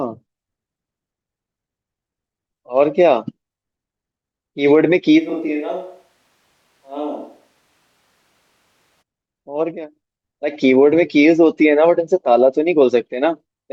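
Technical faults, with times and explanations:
5.20 to 9.01 s, switch to a distant microphone: the speech abruptly turns roomy and hollow, thinner in the bass and roughly 10 dB quieter, with background noise only around 35 dB below it, then snaps back just as suddenly. The close microphone's feed was likely lost in favour of one further away, which captures more reflections and less low end. The waveform envelope shrinks in a clean block; a spectrogram shows faded lows, smeared decays and a raised noise floor.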